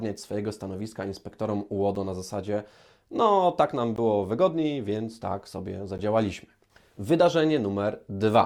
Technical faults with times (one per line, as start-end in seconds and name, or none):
1.95 gap between stream segments
3.96 gap between stream segments
5.98 gap between stream segments